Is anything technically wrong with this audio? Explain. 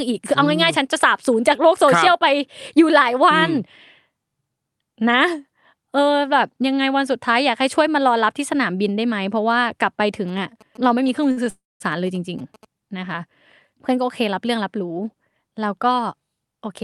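Yes. Three faults are audible, all clustered between 10 and 13 seconds of this speech clip.

GSM signalling bursts run from 10.14 s to 12.65 s. A nearby 2G phone is signalling to its network, not carrying a call. Its radio bursts get rectified in the audio circuitry. The result is a galloping dit-dit-dit of short buzzes. The buzz sits at about 217 Hz, the GSM frame rate. It lies roughly 25 dB below the speech.

A short stall from a late packet occurs at 11.31 to 11.39 s. One packet arrived after its playout time. The jitter buffer ran dry. The receiver stretched the last sound for 55 ms, then resumed from the same point. Nothing is lost. The sound is simply held too long. Everything after it now plays 55 ms later.

A call audio freeze follows at 11.50 to 11.82 s. The likely cause is packets held up in transit, emptying the jitter buffer. The receiver extends the last sound, which fades and then gives way to silence. 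About 210 ms of that is silent. Playback picks up where it stopped, so 301 ms of gap is inserted and nothing is missing. The added delay is also 301 ms. The call codec path limits the top end to about 12 kHz, which fits Opus at a moderate bitrate.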